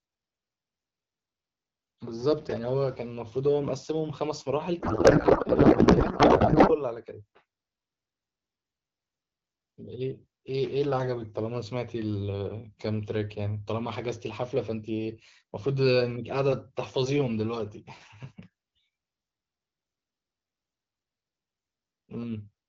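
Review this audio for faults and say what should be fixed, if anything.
Loose connector crackle from 2.31 to 2.58 s: an irregular scratchy burst as a worn contact makes and breaks. The roughness is random, unlike the steady, level-dependent buzz of clipping.

Codec payload misread from 4.79 to 6.76 s: octet-aligned AMR frames decoded as bandwidth-efficient, so the speech becomes garbled warble that barely tracks it. Low-rate AMR-WB raspiness, by contrast, still follows the speech.

Reseat or replace the connector, and make both ends of the AMR-WB session agree on the payload format.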